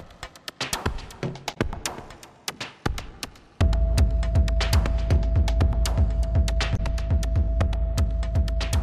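At 1.53 to 1.57 s and again at 6.75 to 6.80 s there's a brief glitch, about 40 ms each, from damaged data in the compressed stream. The decoder hits corrupted frames, misreads them, loses sync and has to hunt for the next valid frame header before playback settles.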